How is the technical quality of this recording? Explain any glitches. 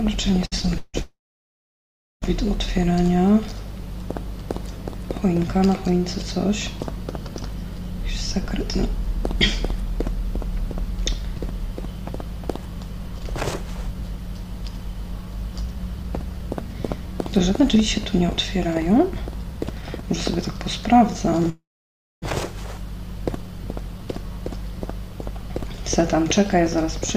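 The recording has some clear network-style glitches: a stutter, two freezes, and two stretches where playback speed shifts.

From 0.45 to 0.96 s there are repeated stalls (stutter). Packets arrived late, so the jitter buffer kept running dry and the receiver stretched the last sound to cover it. That happens four times, the longest gap being 158 ms, so about half that span is filler and it drags and stumbles, though nothing is actually lost.

Then come two call audio freezes, from 1.02 to 2.24 s and from 21.50 to 22.24 s. The sound hangs, trails off, and goes quiet for roughly 1.06 s and 0.6 s, then resumes where it stopped, inserting 1.2 s and 0.72 s of delay. The likely cause is packets held up in transit emptying the buffer.

From 7.97 to 20.04 s there's a jitter buffer speed-up. After a backlog built up, the receiver trimmed tiny pitch-period slices over and over, dropping around 0.7 s in total. 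The sound runs at about 107% speed with unchanged pitch, so it feels a bit rushed.

Finally, from 23.32 to 24.18 s there's a jitter buffer slow-down, the reverse fix. With the buffer low, single pitch periods got repeated, adding 57 ms. It plays at about 94% speed, slightly drawn out, same pitch.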